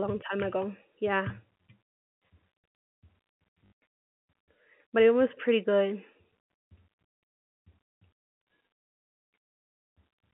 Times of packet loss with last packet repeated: 3.66-3.72

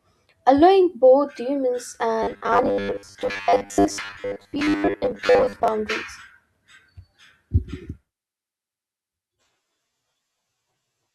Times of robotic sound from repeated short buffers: 2.23-5.68

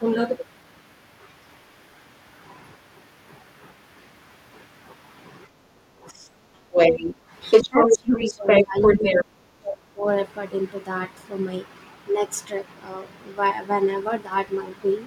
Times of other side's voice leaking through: 6.72-7.14, 7.50-9.24

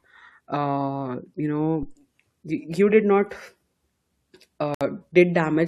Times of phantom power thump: 1.83-1.98

